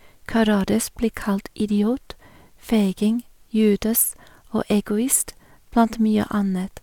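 No technical faults are audible.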